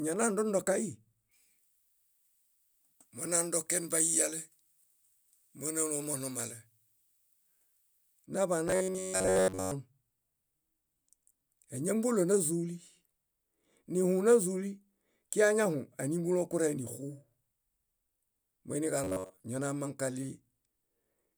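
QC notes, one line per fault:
1.31–8.26 s, pre-emphasis left on: the treble sits about 11 dB high at 10 kHz relative to 1 kHz, so speech turns thin, bright and hissy on sibilants. Unlike a simple treble shelf, the rise follows a broadcast-style emphasis curve that was never undone.
8.68–9.72 s and 19.04–19.45 s, robotic sound from repeated short buffers: speech collapses into a rigid metallic buzz at 93.8 Hz. The likely cause is a roughly 10.7 ms chunk being replayed over and over while most of the real audio is skipped. Unlike dropouts, the sound never goes silent.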